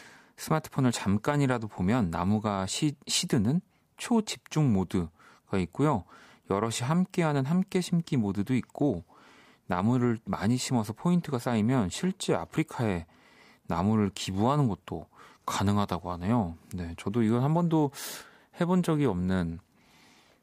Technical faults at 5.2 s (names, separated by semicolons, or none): none